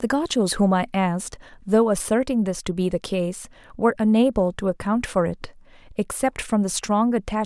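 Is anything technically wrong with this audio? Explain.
No, nothing technically wrong can be heard in this speech recording. No fault turns up anywhere in it.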